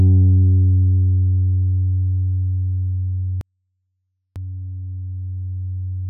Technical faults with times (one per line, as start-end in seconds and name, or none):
3.41-4.36 24-bit alignment error (too quiet)